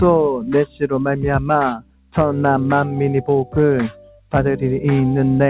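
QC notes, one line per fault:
Throughout: noise suppressor applied to music or sounds; a speech-tuned suppressor treats sustained content as noise, so level pumps by around 10 dB, visible as a wavering envelope.
1.74–2.14 s and 3.89–4.33 s: sound cut by the noise suppressor; sustained portions dip by about 17 dB and 16 dB, showing as darkened spectrogram bands and shrunken waveform.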